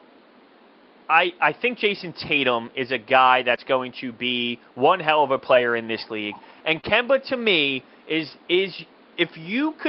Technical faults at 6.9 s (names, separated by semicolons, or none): short concealed packet loss; lost packet rebuilt from error correction